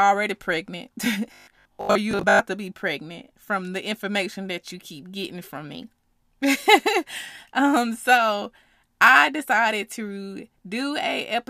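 From 1.33 to 2.39 s, new audio most likely reached the playback software too seldom, so it filled the gaps by looping the last short buffer, repeating material for about half that stretch while the real speech was skipped. The result is robotic sound from repeated short buffers. A rigid, metallic buzz at 50 Hz, which fits a 20 ms buffer, sits over the voice for about a second, still tracking the speech only roughly.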